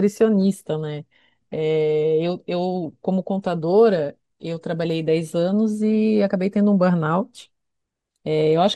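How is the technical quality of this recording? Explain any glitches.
The quality is poor. MP2 compression damage runs throughout. The speech sounds dull and gurgling. Upper bands flicker out, likely from Layer II coding at a low bitrate, perhaps around 80 kbps.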